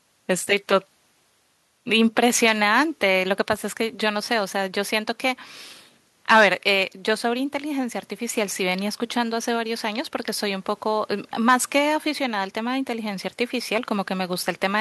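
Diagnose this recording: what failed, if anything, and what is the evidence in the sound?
Nothing failed that I can hear in this speech recording: no stage in the chain, from the wiring through to playback, leaves any mark on the sound.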